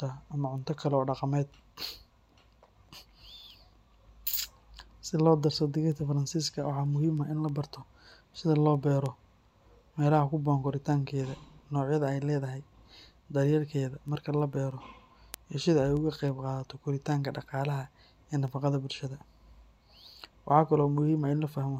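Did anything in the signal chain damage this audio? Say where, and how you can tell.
Yes: word clock ticks from an unlocked digital-interface receiver, about every third of a second from 0.27 to 21.62 s, showing as evenly spaced thin vertical spectrogram lines.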